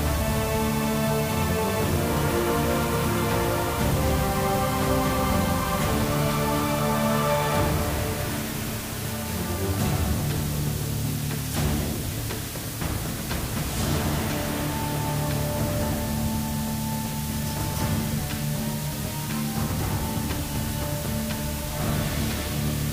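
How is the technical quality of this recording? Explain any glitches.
The recording's technical quality is poor because of one fault that runs through the whole clip.

Low bit depth with dither, throughout: the sound is stored with just 4 bits, and random dither added before rounding turns the coarse quantisation error into steady white noise. The result is a constant, even hiss, only about 10 dB below the signal, with no audible distortion.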